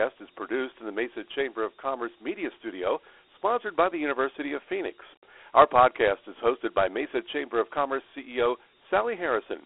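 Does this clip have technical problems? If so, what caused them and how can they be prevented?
Yes. Throughout, this speech sits in a narrow 300 Hz to 3.4 kHz phone band with nothing above 3.9 kHz, and a gritty hiss trails it. That's Dialogic VOX ADPCM, 4-bit steps, probably 8 kHz sampling at 32 kbps. To avoid it, record or export at a wider-band, higher-resolution format.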